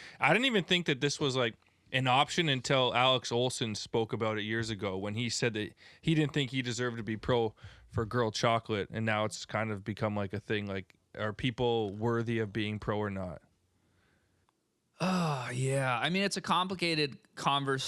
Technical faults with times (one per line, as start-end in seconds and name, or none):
none